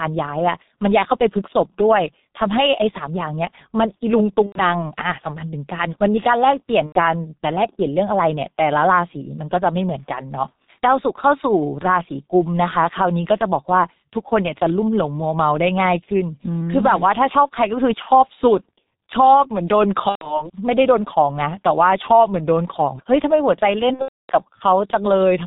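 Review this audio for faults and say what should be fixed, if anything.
The whole recording carries G.723.1 codec damage, and it is heavy. The speech is muffled, with nothing above 4 kHz, a hoarse, rough texture, and smeared consonants. The codec encodes 30 ms frames with a slowly updated vocal-tract model, so fast articulation blurs. The coarseness fits the 6.3 kbit/s mode. Fix: carry the call on a wideband codec such as G.722 or Opus instead of G.723.1.

VoIP packet loss concealed by the speech codec appears five times: 4.46–4.62 s, 6.86–7.00 s, 18.02–18.08 s, 20.09–20.49 s and 23.93–24.34 s. At each gap the decoder repeats its last pitch and filter with falling gain, so the speech turns into a fading buzzy tone or coloured noise. The audio stays weak or distorted briefly after real frames resume. The gaps fit about 90 ms, 90 ms, 30 ms and 120 ms of lost audio. The last is about 330 ms scattered over 360 ms, with a 270 ms run. 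Fix: add forward error correction or redundancy and a properly sized jitter buffer on the network path.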